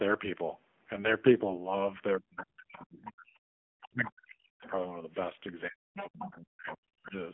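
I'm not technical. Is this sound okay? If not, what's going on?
No. This is speech, and it has three problems.

First, the whole clip went through the AMR narrowband mobile codec, the one used for older mobile calls. It keeps only a narrow slice of sound, with nothing above about 3.6 kHz. That is why the voice sounds muffled and boxy. The codec rebuilds the voice from a simple model, so it also sounds clearly buzzy and a bit artificial, like a poor phone line.

Second, the voice drops away in three places: 2.2 to 3.36 seconds, 3.81 to 4.64 seconds, and 5.69 to 7.15 seconds. In each stretch it gets much quieter, at times almost gone. This is speech suppressed in double talk. The likely cause is that both people talked at once. The call's echo cancelling couldn't tell this voice from the other person's voice on the loudspeaker, so it turned everything down.

Third, there is some of the other side's voice leaking through. 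Faint scraps of a second voice appear at 2.79, 4.64 and 6.7 seconds. A longer and more noticeable stretch runs from 5.95 to 6.24 seconds. This probably comes from the other person's voice playing on this speaker's loudspeaker. The microphone picked it up, and the echo cancelling didn't remove all of it.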